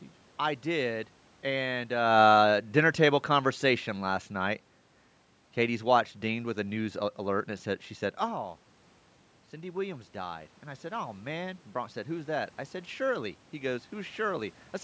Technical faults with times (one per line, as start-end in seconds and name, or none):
9.52-12.37 automatic gain rising